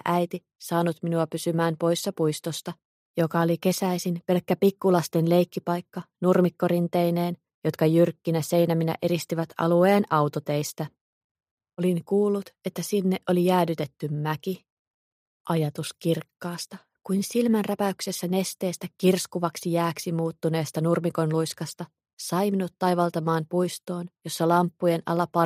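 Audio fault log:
No audible faults detected.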